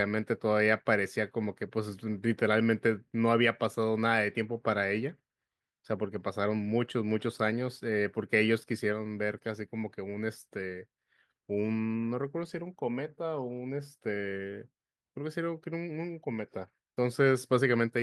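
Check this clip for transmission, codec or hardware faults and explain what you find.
Nothing to report; no faults turn up anywhere in the speech.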